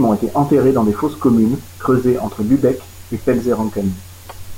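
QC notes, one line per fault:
Throughout: low bit depth with dither. The speech is carried on only 7 bits, so every sample is rounded to one of very few levels. Dither was added before that rounding, which turns the error into a steady, even hiss rather than grainy distortion. The hiss sits roughly 30 dB below the speech and stays the same in pauses and under the voice, because the noise does not follow the signal.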